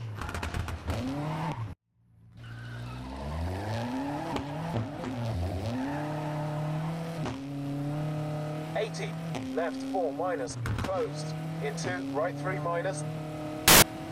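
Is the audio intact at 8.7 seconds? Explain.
Yes, the audio is intact at 8.7 seconds, with no dropout, click, distortion or other fault audible at that point.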